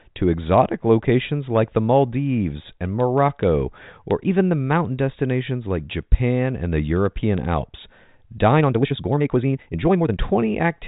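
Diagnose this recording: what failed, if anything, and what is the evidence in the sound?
From 8.50 s to 10.18 s the speech suddenly runs at about 1.81 times its normal pace, yet its pitch does not rise, and that section sounds rushed. This is a time-stretched section, likely introduced in software processing after capture, where the audio was squeezed to fit a length by dropping short pieces. A playback or clock-rate error would raise the pitch along with the speed. The telephone band, which stops at 4 kHz, comes through with no audible codec rasp.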